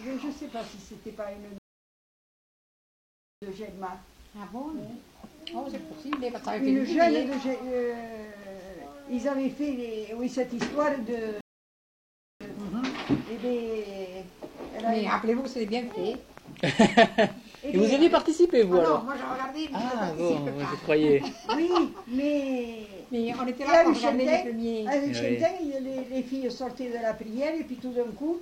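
The audio stops dead twice in a rebuffering stall, first from 1.58 to 3.42 s, adding about 1.84 s, then from 11.41 to 12.41 s, adding 1.0 s. Each time the player has run out of downloaded data and waits in silence for more. Unlike a dropout or packet loss, nothing is skipped: playback picks up exactly where it halted, so the clip simply runs longer. From 15.45 to 20.87 s a train of clicks ticks over the sound at a steady 4.25 per second, about twenty in all, peaking a few dB above the sound itself and audible in quiet moments too. The pulses share one shape and keep an even pace, which sets them apart from random crackle or isolated pops. The likely source is electrical interference from nearby equipment or a faulty connection or power supply.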